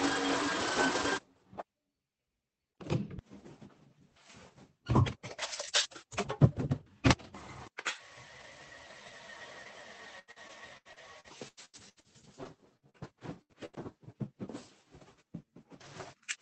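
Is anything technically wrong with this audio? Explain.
Yes. From about 10.19 to 13.77 s there's repeated packet loss with that robotic sound. Packets kept going missing or arriving late, and each time the receiver covered the hole by stretching out the last bit of sound it had. There are about fifteen gaps, the longest around 89 ms, and concealment fills roughly a quarter of that stretch. The result is choppy and robotic, with chunks dropped out, all over the dull, band-limited sound of the call codec.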